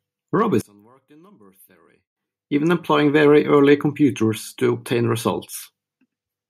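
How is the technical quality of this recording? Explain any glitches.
The recording has two clear glitches, a collapse in level and a later swell.

From 0.61 to 2.17 s the speech almost disappears, dropping by about 31 dB to a faint trace. The likely cause is one channel inverted. With reversed polarity, the shared centre content cancels when the channels sum to mono, leaving only their small difference.

From 2.49 to 5.54 s there is automatic gain rising. The gain control judged the input too quiet and lifted it gradually, by about 7 dB. Voice and background noise grow louder together over those three seconds.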